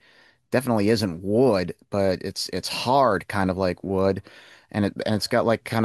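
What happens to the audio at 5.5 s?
Nothing goes wrong at 5.5 s; the speech there plays through intact, with no dropout, click, distortion or other fault.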